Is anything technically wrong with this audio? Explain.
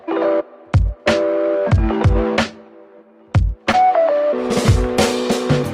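Yes. From 3.71 to 3.75 s there is a brief smear where the sound wobbles and blurs for an instant before settling back. This is short concealed packet loss: roughly 20 ms of audio never reached the decoder in time, which fits a single lost 20 ms packet. The receiver covered the gap by stretching the sound that came just before it, then blended back into the real audio that followed.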